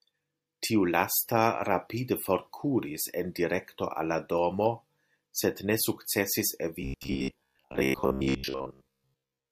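From 6.82 s to the end, the speech turns into robotic sound from repeated short buffers: a rigid metallic buzz near 66.7 Hz, likely from roughly 15 ms chunks being replayed most of the time.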